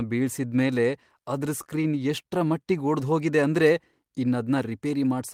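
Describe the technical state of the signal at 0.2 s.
At 0.2 s the speech signal is intact, with no audible dropout, distortion or other technical fault at that point.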